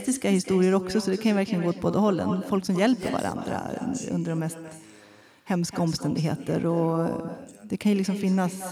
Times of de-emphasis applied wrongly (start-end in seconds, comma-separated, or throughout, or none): none